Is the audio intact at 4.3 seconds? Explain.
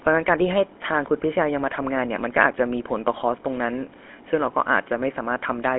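No. At 4.3 seconds you're hearing GSM full-rate codec damage, and it runs through the whole clip. The codec rebuilds speech from a vocal-tract model driven by a sparse, regularly spaced pulse excitation, so the voice picks up that buzzy, gravelly roughness, and it's plainly audible here. The band is squeezed to a phone line, roughly 250 Hz to 3.4 kHz, with nothing above 3.8 kHz, which fits the 13 kbps GSM rate.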